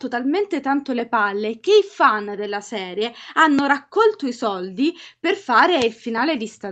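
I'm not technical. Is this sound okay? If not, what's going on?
Yes, this sound is okay; it has simply been through the normal microphone processing of a call.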